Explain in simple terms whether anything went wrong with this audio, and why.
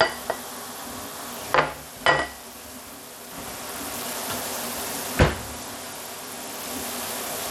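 The audio was most likely squeezed through Bluetooth SBC compression, a basic wireless codec that saves data by coarsely rounding off the sound. From start to finish the treble is cut off above about 17 kHz, leaving a clearly audible gritty roughness.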